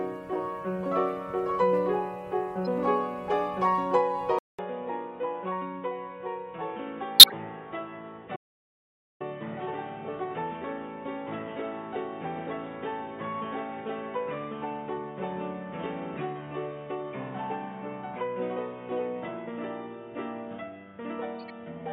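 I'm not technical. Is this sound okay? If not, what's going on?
No. At 2.65 s, and again from 7.19 to 7.33 s and from 21.40 to 21.50 s, you hear a corrupt frame decoded: damaged chunks of compressed data played anyway, giving brief squeaks or noise bursts. The 7.19 s burst is loud and the last is faint.

At 4.39 s, after a fifth-of-a-second gap, the input most likely switched to a poorer device. From there to the end the sound is quieter, muffled, missing everything above 3.8 kHz, with faint new hiss.

From 8.36 to 9.20 s, an audio dropout to silence leaves 0.84 s of dead quiet, probably from a briefly lost connection.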